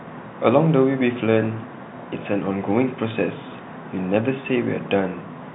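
Nothing stood out on listening to this speech, which carries the band limit of G.711 telephone coding, with nothing above about 3.9 kHz.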